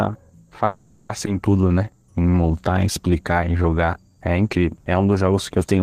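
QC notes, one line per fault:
0.65–1.11 s, call audio freeze: packets likely stalled and the jitter buffer ran dry, so the last sound is stretched into a fading buzz for 440 ms, then resumes intact.
1.25 s, skip ahead: a stretch of roughly 0.3 s was dropped while later audio waited, so playback jumps forward with a near-seamless splice.
1.61–4.16 s, jitter buffer slow-down: the buffer rebuilt its reserve by repeating pitch periods, adding 307 ms, so the speech runs at 88% speed, drawn out at unchanged pitch.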